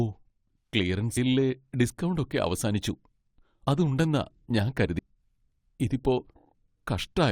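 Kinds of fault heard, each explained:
Compressed frames skipped: at 1.16 s and 4.98 s, just after "അത് ഉണ്ടെന്നാ ഞാൻ", the speech leaps ahead as whole 21.3 ms coded frames are dropped, losing roughly 100 ms and then 150 ms.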